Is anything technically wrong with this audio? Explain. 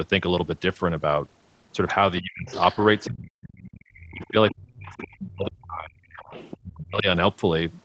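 Yes, two faults recur through this speech clip.

The other side's voice leaking through appears at 2.16–3.07 s, 3.58–4.55 s, 4.89–5.27 s and 6.04–6.57 s. It is a second voice about 20 dB below the talker, nearer 15 dB at 4.89 s, likely because the echo canceller left loudspeaker sound in the microphone signal. On a spectrogram it shows as faint, broken harmonic traces between the talker's own.

Speech suppressed in double talk hits at 2.2–2.51 s, 3.09–3.57 s, 3.96–6.02 s and 6.62–7.07 s. The talker dips by as much as around 40 dB. Here the canceller, likely unable to separate talker from echo, attenuated both.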